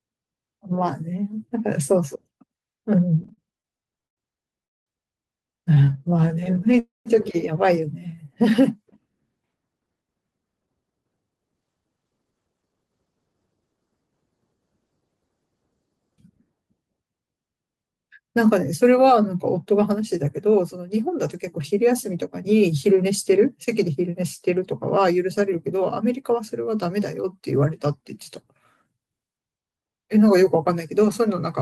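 Repeated stalls (stutter) run from 3.23 to 6.75 s: 19 brief hangs, the longest 104 ms, where late packets drained the jitter buffer and the receiver stretched the last sound.

A call audio freeze at 4.65 to 4.88 s drops into about 210 ms of silence before the audio resumes where it stopped, likely from packets held up in transit.

Jitter buffer slow-down from 5.85 to 8.16 s repeats pitch periods to rebuild reserve, adding 157 ms, so the audio drags at 94% speed without any pitch change.

A second call audio freeze, 6.79 to 7.08 s, brings about 160 ms of silence and then a resumption, likely caused by another delivery hold-up.

Jitter buffer speed-up from 9.74 to 13.48 s trims short pitch-period pieces to cut excess delay, removing about half a second, so the audio sounds hurried at 114% speed.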